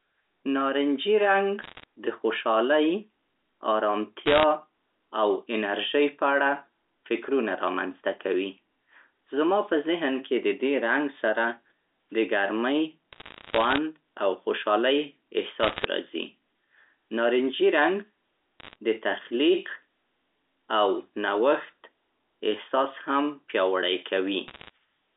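Speech over an A-law telephone line, band-limited to roughly 300 Hz to 3.7 kHz, with short bursts of bit errors on a digital phone line at 1.62–1.84, 4.26–4.44, 13.13–13.78, 15.60–15.85, 18.60–18.76 and 24.48–24.70 s. Around one bit in a hundred flips, each knocking a single sample off. Hits on sign or high bits give sharp ticks and crackle over the voice, thickest at 15.6 s and lightest at 18.6 s.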